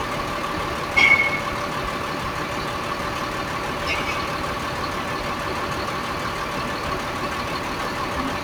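No technical fault can be heard anywhere in this recording of sounds; the signal stays intact throughout.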